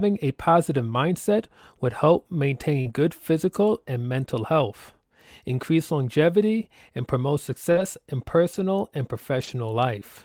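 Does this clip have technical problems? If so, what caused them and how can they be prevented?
Yes. Short concealed packet loss occurs at 2.81–2.87 s and 7.71–7.77 s, right after "increase longevity and promote". Each time about 40 ms of audio arrived too late, and the decoder filled it by extending the preceding sound. On a spectrogram the harmonics smear flatly across the gap; the waveform shows repeated, overly regular cycles. A larger jitter buffer or a steadier network path prevents this.

A lost packet rebuilt from error correction is heard at 2.85–2.91 s, just before "good physical and mental", at 7.75–7.81 s, at 8.53–8.59 s, and at 9.39–9.49 s. These are stretches of 40 ms, and 60 ms for the last, which fits two or three 20 ms packets played from a low-bitrate backup copy. They sound briefly rough and grainy; a spectrogram shows blurred, noisier patches. Reducing packet loss on the link prevents this.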